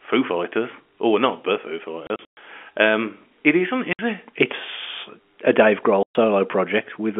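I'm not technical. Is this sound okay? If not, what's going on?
No, the speech drops out in three places, and that's packet loss filled with silence. Chunks of audio got lost on the way and were replaced with dead air, so you hear sudden holes. The worst is from 2.07 to 2.37 s, a broken patch of gaps about 180 ms in total. Shorter holes follow at 3.93 to 3.99 s and 6.03 to 6.15 s. The gap lengths fit audio sent in 30 ms pieces, which is normal for a phone line.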